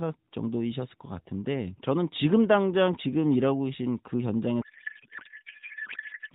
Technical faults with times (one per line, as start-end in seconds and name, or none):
4.62-6.35 codec payload misread